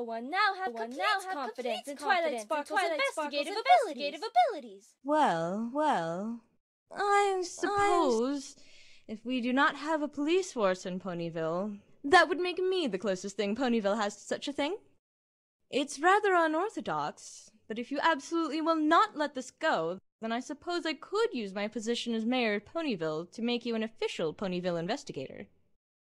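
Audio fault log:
0.67–8.19 s, doubled audio track: likely a slower second capture or out-of-step edit, so a dry full-band copy repeats everything about 0.7 s late at near-equal level.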